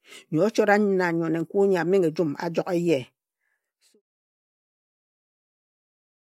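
Nothing in this speech recording points to a technical fault, and the smooth fade-out that begins around 3.5 s and reaches silence at 4.02 s is a deliberate, even taper with no hard edge.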